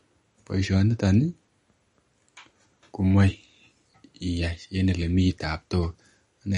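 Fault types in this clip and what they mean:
MP3 compression: The speech has a hard treble ceiling with nothing above 10.6 kHz, and a plainly audible watery, swirling texture as weak frequency components flicker between frames. This is likely MP3 encoding, consistent with a low bitrate around 40 kbps.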